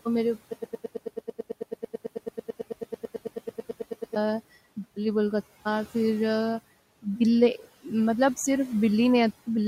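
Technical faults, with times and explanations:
0.53 to 4.16 s, broken-record loop: A fragment of about 110 ms repeats exactly and back to back, 33 times, so for over three and a half seconds the audio stutters in place instead of moving forward. This points to a player, encoder or stream that stalled and kept sending the last piece it held. Whatever should have played during that stretch never arrives; it is simply lost, not delayed.
1.93 to 3.15 s, speech cut by the noise suppressor: Within this span, short portions of speech totalling roughly a tenth of a second are turned down along with the background, by about 8 dB at the deepest point. The suppressor misjudged those quieter parts of the speech as noise and attenuated them, so soft consonants or word endings come across faint or swallowed. The room noise, sitting about 20 dB below the speech, is part of the recording and is not a fault.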